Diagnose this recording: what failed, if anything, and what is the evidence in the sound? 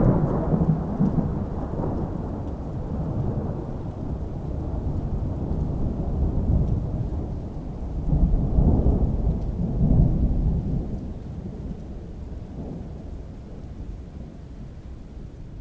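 Nothing failed: the audio carries the band limit of a wideband call path, with nothing above 8 kHz, which fits G.722 at 64 kbps, and no stage from capture to playback leaves any audible defect.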